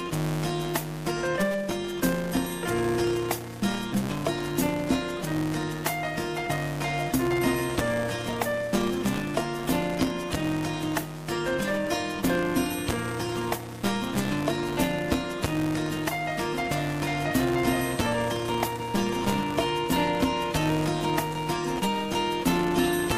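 A steady buzz at 200 Hz runs under the sound from start to finish, rising and falling with its level. This is a filter restarted on every block: it loses its state at each boundary, so every block opens with a small transient, 200 times per second.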